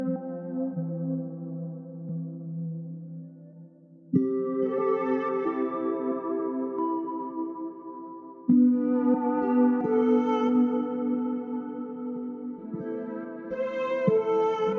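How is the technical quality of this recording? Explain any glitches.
No glitches or technical faults can be heard here.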